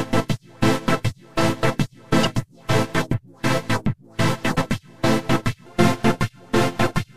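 Damaged data in the compressed stream of this audio makes the decoder lose sync twice, producing brief glitches at 2.21–2.25 s and 4.54–4.58 s.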